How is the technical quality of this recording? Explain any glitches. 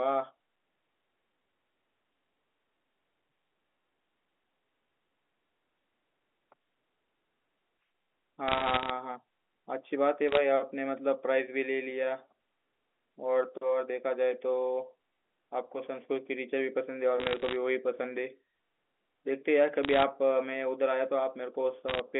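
The recording has one recurring fault: bit errors on a digital phone line. The speech comes over a G.711 A-law telephone channel, and the band is limited to roughly 250 Hz to 3.4 kHz. The errors arrive in five short bursts, at 8.48 to 8.90 s, 10.29 to 10.37 s, 17.20 to 17.56 s, 19.83 to 20.03 s, and 21.89 to 22.00 s. In each burst, somewhere between half a percent and one percent of the bits are flipped. Each flipped bit corrupts a single sample. When a high-order bit, or the sign bit of a loud sample, is hit, that sample jumps sharply. These jumps sound like sharp ticks and crackle laid over the speech.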